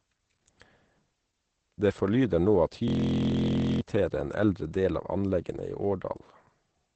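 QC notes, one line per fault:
Throughout: Opus voice compression. The speech is coded in SILK wideband mode with nothing above 8.6 kHz, and the coarse excitation coding, consistent with roughly 12 kbps, leaves it muffled, hoarse and slightly robotic. The damage is plainly audible.
2.88 to 3.81 s: system hang loop. Just after "forlyder nå at", one 23.22 ms slice of audio repeats exactly about 40 times, which fits a frozen 1024-sample ring buffer. It sounds like a steady 43.1 Hz buzz and replaces about a second of sound before "en eldre del av" resumes.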